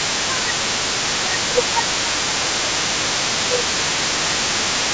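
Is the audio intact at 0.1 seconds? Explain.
No. From 0.0 to 0.54 s the talker's speech dips by around 10 dB in pieces, most likely speech suppressed in double talk: with both sides talking, the echo canceller turned everything down. Unlike a dropout, the sound thins and ducks rather than going fully silent.

Across the whole clip, the other side's voice leaking through sits roughly 10 dB below the talker, most likely echo the canceller failed to remove from the loudspeaker. It is a second, separate voice, not a delayed copy of the talker.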